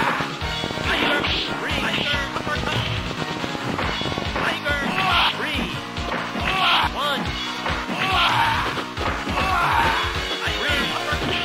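From 0.03 to 4.72 s, a train of clicks, likely interference, ticks irregularly at 9.4 per second, showing as waveform spikes and thin vertical spectrogram lines.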